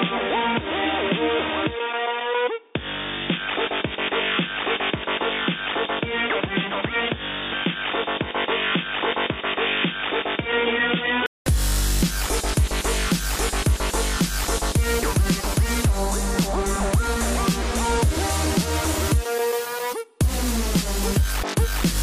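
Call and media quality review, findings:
0.00–11.46 s: dull, boxy band-limit, nothing above 3.6 kHz, somewhat quieter, faint extra hiss. Brief 0.2 s gap at 11.46 s, then full band. Likely input switched to a poorer device.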